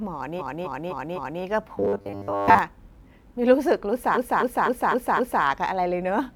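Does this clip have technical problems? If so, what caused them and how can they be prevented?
Yes. From 0.38 to 1.41 s the speech stutters, replaying a 256 ms block four extra times and adding 1.02 s. From 4.14 to 5.42 s it repeats five extra times, adding 1.28 s. These are repeated frames: the same compressed chunk was sent or written more than once. Deduplicating frames by sequence number before decoding prevents this.

Between 1.78 and 2.59 s the speech turns into a rigid, metallic buzz pitched at 100 Hz. This is robotic sound from repeated short buffers, likely caused by audio arriving too seldom. The player loops a roughly 10 ms slice while most of the real audio is skipped. A larger jitter buffer or proper packet-loss concealment prevents it.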